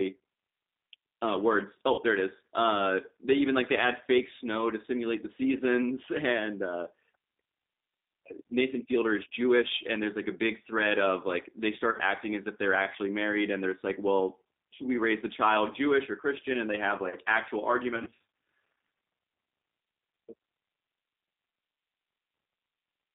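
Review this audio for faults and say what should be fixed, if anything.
Throughout, the speech is narrowband, rough and slightly synthetic. Nothing comes through above about 3.7 kHz or below about 250 Hz, and the sound has a plainly audible rough texture. This is the G.729 codec, here the G.729A variant at 8 kbit/s. It rebuilds each 10 ms frame from a vocal tract filter, a pitch predictor and a few pulses, so the fine detail of the original waveform is lost. To prevent it, carry the call on a wideband codec such as G.722 or Opus instead of G.729.

At 1.94 to 2.01 s, 11.91 to 12.01 s and 17.96 to 18.20 s the speech briefly smears into a buzzy tone or coloured noise that fades, and stays weak or distorted just afterwards. The last stretch is the longest and most broken-up. This is VoIP packet loss concealed by the speech codec. The decoder extends its last pitch and filter state with falling gain, and because each frame depends on the previous one, the error lingers after packets return. 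The damage fits about 40 ms of missing audio at each of the first two points, scattered over 80 ms at 11.91 s. At 17.96 s it fits about 190 ms of missing audio scattered over 380 ms, in runs of up to 40 ms. To prevent it, fix the network loss with QoS marking, a better link or a larger jitter buffer, or add forward error correction.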